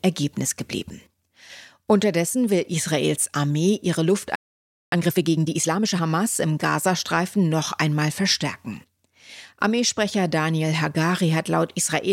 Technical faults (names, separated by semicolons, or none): playback stall; time-compressed catch-up